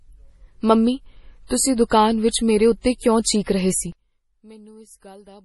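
MP3 compression runs throughout the speech, with heavy codec damage. The band stops at 11.5 kHz, and the watery, swirling texture points to a low bitrate around 32 kbps. Starved of bits, the encoder drops weaker frequency lines, which flicker on and off from frame to frame. It also cuts the treble at a fixed ceiling. The likely cause is a low-rate MP3 encode, and the result is smeared attacks and a warbling, metallic coloration.

Pre-echo appears at 1.47 s, just before "ਤੁਸੀਂ ਦੁਕਾਨ ਵਿੱਚ ਮੇਰੇ", and again at 2.81 s, right after that phrase, then at 2.98 s and 3.22 s. Each time a sharp onset lands late in a transform block. The quantisation noise meant for the loud part spreads back over the whole block, so roughly 34 to 37 ms of hiss leads each attack, and the attack itself sounds blunted.

One channel inverted is the likely cause of what happens from 3.92 s, just after "ਰਹੇ ਸੀ", until the end of the clip. 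The sound drops by about 25 dB, background included. With one side's polarity reversed, the material the two channels share cancels when they are summed to mono. Only the small difference between them survives, and it comes through as a faint residue.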